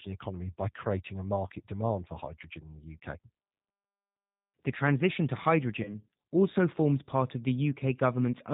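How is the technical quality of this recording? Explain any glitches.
The technical quality is limited by a low-rate speech codec throughout, plus one short dropout.

The G.729 codec runs for the whole clip. It fits an 8 kbit/s G.729A stream: the encoder keeps only a vocal tract filter, a pitch predictor and a few pulses per frame, so nothing above 4 kHz survives. The speech therefore sounds band-limited, plainly rough and slightly synthetic, with a dull, boxy top end.

VoIP packet loss concealed by the speech codec occurs from 5.83 to 5.95 s, right after "transition to" and before "also forms part of". About 20 ms of audio went missing, which fits a single lost packet. The decoder covered the hole by extending its last pitch and filter settings with falling gain. You hear a brief buzzy or noisy smear as the sound fades, and it stays weak or distorted for tens of milliseconds or more while the decoder recovers.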